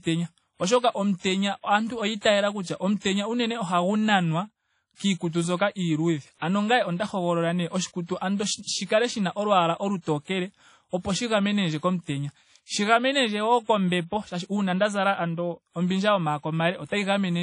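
Throughout the speech there is plainly audible WMA compression damage. Nothing is heard above about 10.1 kHz, so the top octave is gone. The sound rings and washes, and a hiss rises and falls with the signal. A transform codec like this one smears quantisation noise across long blocks and drops weak detail when bits run short. That fits a low bitrate near 32 kbps, likely from a WMA encode.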